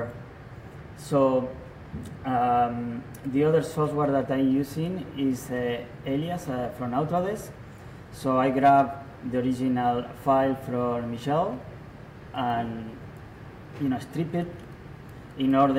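An electrical switching spike lands at 12.50 s as a sharp snap or tight cluster of clicks, peaking at about -30 dBFS, so it sits low on top of the audio. It is most likely a nearby switch, motor or static discharge arcing briefly, with the audio line picking up that burst.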